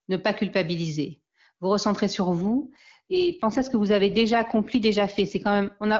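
A French speech clip carried over AMR wideband (HD Voice), clean at first, shows an AMR rate drop from 2.42 s, just after "culpabiliser vous recentrez sur", to the end at about 6 s. The sound turns rough and raspy, which fits the network moving the codec from its top 23.85 kbit/s mode to 8.85 kbit/s. Unlike a fallback to narrowband, the bandwidth stays the same, and unlike packet loss there is no gap or dropout.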